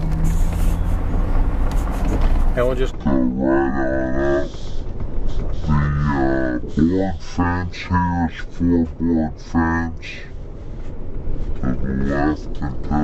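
From 2.91 s to the end, it's stereo read as mono: left and right samples get strung into one channel, so everything drops to half speed and a full octave down.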